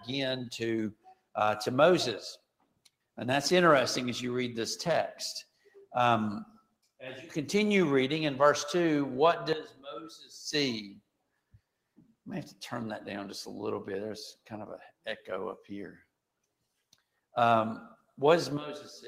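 Throughout, the level rises and sinks by around 10 dB as steady parts fade away. This is a noise suppressor applied to music or sounds: a speech-oriented suppressor treats sustained content as noise.

Deeper dips occur at 0.91–1.36 s, 2.37–3.18 s, 5.44–5.94 s, 6.45–7.01 s, 9.68–10.31 s, 10.89–12.27 s, 14.89–16.11 s and 17.96–18.18 s. These are sound cut by the noise suppressor, which mistook that sound for noise. Most fall by about 21 dB, but the one at 9.68 s falls by about 11 dB and the one at 17.96 s by about 16 dB.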